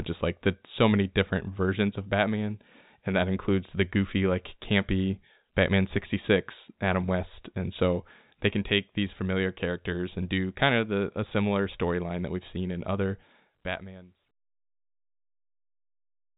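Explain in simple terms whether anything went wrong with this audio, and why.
Nothing went wrong: the speech is telephone-quality G.711 audio with nothing above 3.8 kHz, as a phone line carries it, and the smooth fade-out from around 13 s to 14.32 s is a deliberate edit, not a fault.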